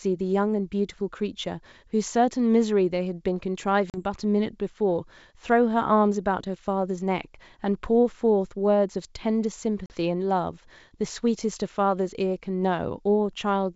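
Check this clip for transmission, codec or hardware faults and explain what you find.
Two dropouts from packet loss on an ADPCM call, at 3.90 to 3.98 s and 9.86 to 9.95 s. Each loses about 40 ms of a G.722 wideband stream, roughly a couple of packets. Silence fills each hole, and the decoder's predictor and step size then restart out of step, so the returning speech comes back slightly distorted. Unlike a plain dropout, the distortion persists briefly after the hole.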